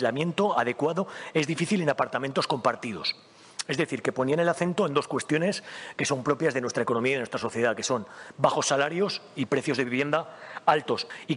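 No technical faults can be heard anywhere in this clip.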